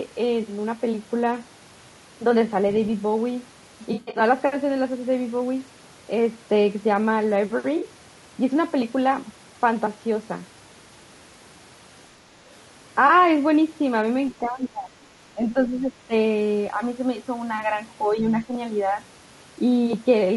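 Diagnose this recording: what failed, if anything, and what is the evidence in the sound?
Codec stage: the speech is rough and grainy throughout, with noise filling the gaps between harmonics and a thin, synthetic-sounding top band. This is likely low-delay AAC compression (AAC-ELD). Its short frames resolve pitch harmonics poorly, and the damage level points to around 32 kbps.

Network and codec: AAC frame loss with concealment occurs at 3.93–4.21 s, 7.77–7.83 s and 13.07–13.10 s. The first patch has gaps scattered over about 200 ms, with the longest near 70 ms. The later two are brief patches where the decoder reused the last good spectrum.

Call processing: the speech is suppressed in double talk at 14.41–14.92 s and 15.33–16.12 s. The level drops by about 15 dB. The likely cause is an echo canceller that could not separate the talker from loudspeaker echo and attenuated both.

Call processing: the other side's voice leaks through at 18.40–18.44 s as a faint scrap about 25 dB below the speech. 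The likely cause is loudspeaker pickup at the talker's microphone that the echo canceller did not fully remove.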